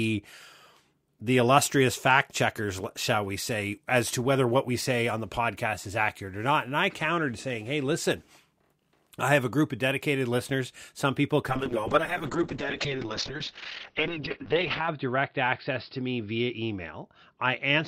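At 11.5 s a call bitrate drop sets in and lasts to the end. The audio bandwidth narrows from 20 kHz to 6 kHz and the coding turns coarse, which fits a fall from roughly 64 to 10 kbps. The sound becomes muffled and watery, worst for about 3.39 s.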